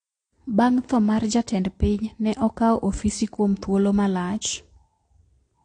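From start to finish the speech carries the marks of transcoding between lossy codecs, likely an AAC-LC encode at a low bitrate passed on through Vorbis. Nothing reaches above about 9.8 kHz, a ceiling set by the lowest cut-off in the chain. Unlike a single low-bitrate encode, two sets of artefacts are heard at once: the artefacts of the first codec are re-coded by the second, whose own artefacts sit on top.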